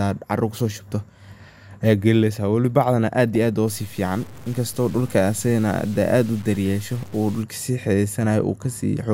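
At 3.35 s there's a brief blip of DAB burbling, a quick burst of noise over the speech. That's what happens when weak reception lets bit errors slip past the error correction into the MP2 data. Corrupted samples put short blips of noise in single sub-bands, and corrupted scale factors make sub-bands jump in level for a moment. The error rate behind it sounds low, only a fraction of a percent.

From 3.68 s to 7.43 s the speech turns grainy, with a gritty distortion that rides along with the voice and gets worse as it gets quieter. This is likely low bit depth without dither: the signal was truncated to very few bits, which fits roughly 7-bit, with no dither to decorrelate the error. The resulting noise sits only about 25 dB below the signal.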